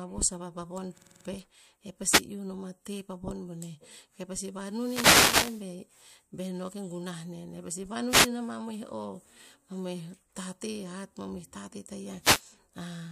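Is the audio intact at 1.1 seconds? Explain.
No. A system hang loop runs from 0.98 to 1.25 s: a frozen system left the hardware replaying one 46 ms chunk, which fits a 2048-sample buffer, six times at 21.5 Hz, producing a rapid stutter. Unlike a dropout or a glitchy repeat, the copies are exactly identical.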